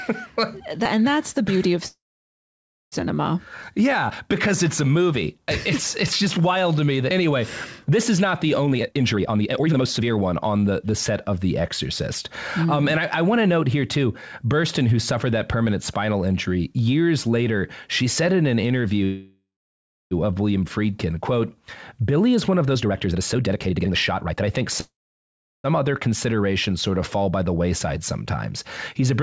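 Call audio freezes at 1.88–2.94 s, 19.04–20.13 s and 24.81–25.66 s, likely from late packets draining the jitter buffer. A fading buzz or hiss gives way to silence, a flat gap in the waveform, before the audio resumes where it stopped. Jitter buffer speed-ups at 8.66–11.38 s (138%) and 22.29–24.62 s (141%) each trim roughly a second of pitch periods. The sound hurries at unchanged pitch, and the spectrogram looks horizontally compressed.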